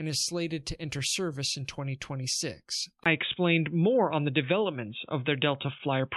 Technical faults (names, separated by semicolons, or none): input switched to a poorer device; repeated frames